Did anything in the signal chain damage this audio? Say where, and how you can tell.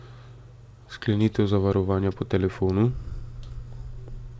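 No, nothing stood out on listening as damage anywhere in the chain; the speech came through a WebRTC call path using G.722, which leaves no content above 8 kHz, as that path normally does.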